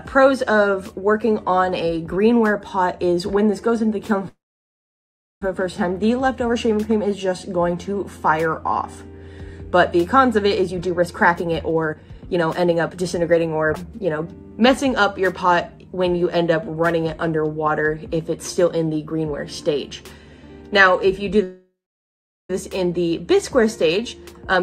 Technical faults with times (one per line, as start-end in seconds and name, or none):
4.28-5.42 call audio freeze
10.57-14.77 jitter buffer speed-up
21.43-22.50 call audio freeze
24.05-24.62 jitter buffer speed-up